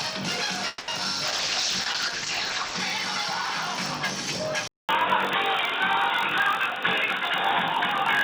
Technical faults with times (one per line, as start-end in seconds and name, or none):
0.00-8.23 block size mismatch (padded)
0.68-0.90 call audio freeze
1.26-2.86 call bitrate drop
4.68-8.23 input switched to a poorer device
7.05-7.22 jitter buffer speed-up